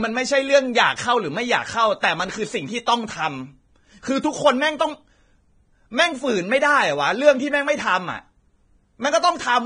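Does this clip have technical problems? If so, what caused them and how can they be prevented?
Yes. The speech was likely squeezed through heavy Vorbis compression, at a rate the sound suggests is near 22 kbps. The encoder lowered its cut-off and quantised the remaining treble coarsely, so the voice sounds dull, hissy and grainy, with blurred consonant edges. Encoding at a higher quality setting or bitrate prevents this.

There is also pre-echo from 2.86 to 2.88 s. The codec spread quantisation noise sized for a sharp attack across its whole block, which filled the quiet moment before that attack. The result is a hiss about 20 ms long just ahead of the onset, and the attack itself sounds smeared. A higher bitrate with the encoder's block switching working properly prevents it.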